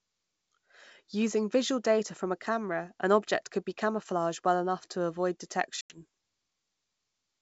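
Speech coded with G.722 at 64 kbit/s shows packet loss on an ADPCM call from 5.81 to 5.99 s: about 90 ms, around ten packets, drops to hard-edged silence. Unlike a plain dropout, the audio afterwards returns slightly distorted while the decoder's predictor and step size resynchronise.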